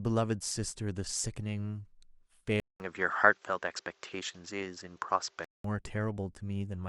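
Input switched to a poorer device, from 2.6 to 5.64 s: after a 200 ms silence, the speech turns duller, with nothing above 7.7 kHz, a level shift of a few decibels and a faint new noise floor, likely because recording moved to another microphone before switching back.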